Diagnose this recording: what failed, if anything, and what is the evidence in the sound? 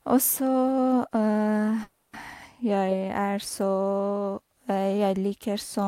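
A call audio freeze in the network stage sits at 1.83 to 2.16 s: the speech stalls into a fading buzz filling about 300 ms, then resumes exactly where it stopped, now 300 ms late. That points to a jitter buffer that likely ran empty. Unlike a packet-loss dropout, no speech is missing.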